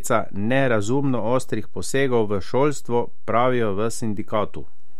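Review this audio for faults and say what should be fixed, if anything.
A DC offset runs through the whole speech clip: the waveform sits shifted off zero by a constant, eating headroom and leaving steady energy at 0 Hz. Unlike low-frequency rumble or hum, it has no pitch or movement; a high-pass filter removes it. Prevent it by using properly coupled, calibrated converters and preamps.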